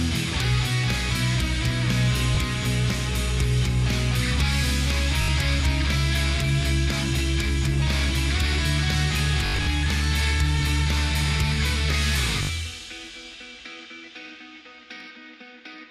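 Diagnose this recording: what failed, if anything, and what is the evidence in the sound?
Short, buzzy repeats break the sound at 2.35 s, 5.22 to 5.28 s, 9.46 to 9.67 s, 12.43 to 12.49 s and 15.00 s. The longest burst, near 9.5 s, is a ragged machine-gun stutter over about 0.2 s. This is Bluetooth stutter on the wireless playback link. When audio data arrived late or not at all, the receiver replayed its last slice of about 20 ms until fresh data came, and the sound then resumed further along.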